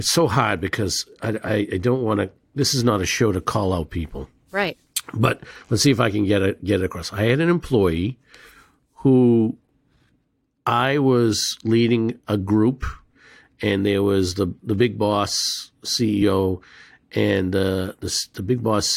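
At 4.93 s, and at 16.21 s after "the the big boss", compressed frames are skipped. The audio jumps ahead, about 50 ms, then 20 ms.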